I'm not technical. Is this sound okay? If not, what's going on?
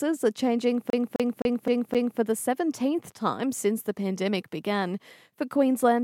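No. From 0.90 to 2.20 s, one 0.26 s snippet of speech stutters five times, like a skipping CD: the CD stuck on one turn, replaying one scratched spot.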